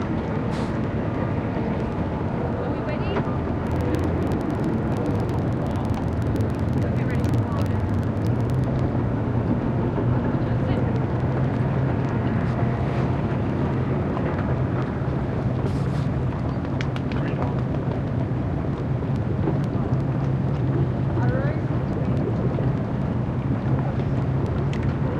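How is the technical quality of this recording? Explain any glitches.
The recording has two technical faults: a steady tick running through almost the whole clip, and a low buzz added for a few seconds near the start.

Word clock ticks run from 0.12 s to 25.19 s, about every tenth of a second, roughly 200 in all. The receiving device is on its own clock rather than locked to the sender's, and the two differ by something like 200 ppm. Each time they slip past one another, one sample is dropped or repeated, leaving a sharp click of uneven strength at that regular spacing.

A filter restarted on every block affects the audio from 3.67 s to 8.70 s. The filter discards its memory at each block boundary and starts again from silence, so every block opens with a small transient. The spacing fits a 2048-sample block, and the repeated transients merge into a buzz at 21.5 Hz that rises and falls with the level of the sound beneath it.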